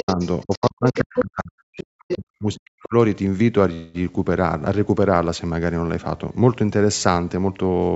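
The echo canceller likely left the far end's loudspeaker sound in the microphone signal, so the other side's voice leaks through from 0.0 to 0.7 s at about 15 dB below the talker. It returns at 0.87 to 1.25 s at roughly equal level, faintly at 1.78 to 1.84 s, and at 2.08 to 2.18 s only about 5 dB down.

Over the same stretch, both sides talking at once likely pushed the canceller into suppressing the talker too. This is speech suppressed in double talk: the voice drops by up to about 30 dB between 0.03 and 0.2 s, then is turned down again between 0.44 and 2.94 s, with dips of up to about 40 dB and roughly two seconds affected in total.

At 3.73 s, packets likely stalled and the jitter buffer ran dry. The call audio freezes for 207 ms into a fading buzz until 3.96 s, then resumes where it stopped, with nothing lost but everything after it delayed.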